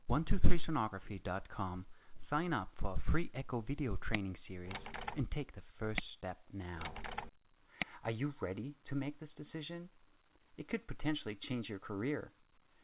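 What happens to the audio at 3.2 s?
Nothing goes wrong at 3.2 s; the audio carries straight through that moment, with the call path's narrow band, nothing above 4 kHz, the same there as elsewhere.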